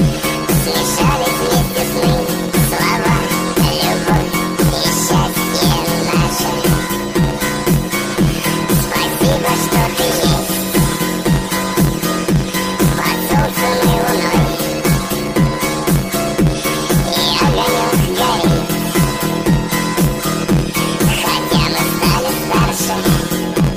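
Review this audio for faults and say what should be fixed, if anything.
There's a planar audio read as interleaved problem running through the whole clip. Each block, about 11.61 ms long, holds all of one channel's samples and then the other's, but it gets read as alternating pairs. That chops the sound into a robotic buzz at 86.1 Hz, with no clear octave jump, which fits 512-sample blocks. To prevent it, make sure the reader's channel layout flag matches the buffer format, converting planar to interleaved before playback or encoding.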